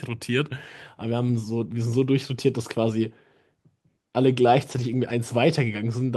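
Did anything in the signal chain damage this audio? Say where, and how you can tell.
Yes, at the network stage: lost packets were rebuilt from error correction between 4.71 and 5.01 s, roughly 160 ms of rebuilt audio, which fits several separate lost packets. Each loss was covered by a low-bitrate copy carried in the next packet, so there is no gap, but the speech turns rougher and noisier there.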